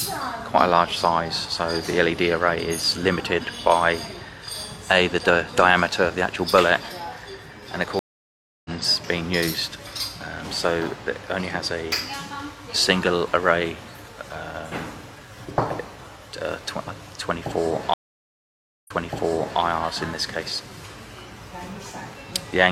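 At 7.99 s the stream drops out in a stream reconnect: about 0.66 s of silence, after which a fresh decoder picks up the audio roughly 0.7 s further on, so a short stretch is simply missing. At 17.94 s a second reconnect leaves about 0.93 s of silence, but this time the server resends a burst and playback resumes 0.74 s earlier, repeating material already heard before running on past 19.60 s.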